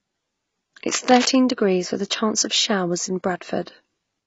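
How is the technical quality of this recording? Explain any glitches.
The recording's technical quality is poor: the speech has plainly audible coding damage throughout, a burst of scratching, and one smeared attack.

Throughout the clip, AAC compression, likely at a rate around 24 kbps, leaves the sound dull and smeared with nothing above 7.7 kHz. A spectrogram shows a flat ceiling there.

From 0.91 to 1.35 s, cable scratch noise, likely from a worn contact, adds dense, uneven crackle about 10 dB below the speech. It appears as ragged broadband streaks on a spectrogram.

At 3.66 s, pre-echo occurs because the codec spreads quantisation noise across its block. A 15 ms hiss precedes the attack, visible as a smear just before the onset.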